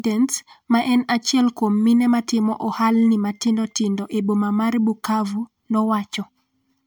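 Generation loss runs throughout: the speech sounds swirly, smeared and hollow, attacks blur, and nothing sits above 20.1 kHz. It likely comes from roughly four MP3 passes at what fits 128 kbit/s, each requantising on a shifted frame grid, so noise and spectral holes accumulate.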